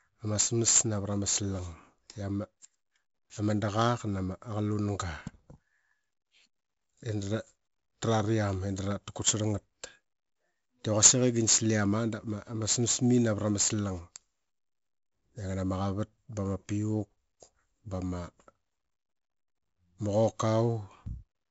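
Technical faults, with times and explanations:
Throughout, 4-bit ADPCM compression: each sample is coded as a coarse 4-bit step from a prediction, leaving heavy gritty hiss on loud syllables and distorted onsets. A spectrogram shows noise tracking speech level and nothing above 7.7 kHz, fitting a 64 kbps stream.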